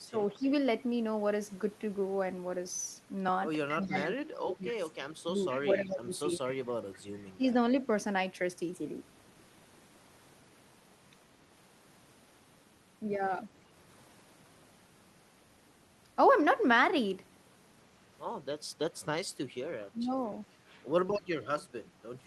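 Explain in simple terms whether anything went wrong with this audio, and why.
Speech suppressed in double talk, likely: at 0.0 to 0.43 s, 3.69 to 7.54 s and 19.92 to 20.11 s the voice briefly dips or drops out, instead of fading steadily like a weak connection.

Echo leak, likely: at 3.87 to 4.04 s and 5.49 to 5.96 s a faint repeat of the voice arrives about a quarter second late, distinct from room reverb.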